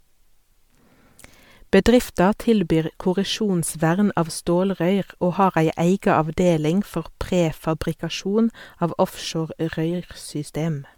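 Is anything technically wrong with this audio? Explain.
Yes. Generation loss runs throughout: the speech sounds swirly, hollow and smeared, with blurred attacks, likely from about seven successive MP3 encodes near 135 kbit/s compounding quantisation noise.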